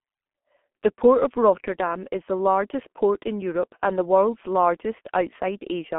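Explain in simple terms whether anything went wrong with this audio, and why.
Something did go wrong: the whole clip passed through the G.723.1 codec, an old internet-phone format. It discards everything above about 3.8 kHz and rebuilds the voice coarsely, so the speech sounds muffled and hoarse, with smeared consonants, throughout.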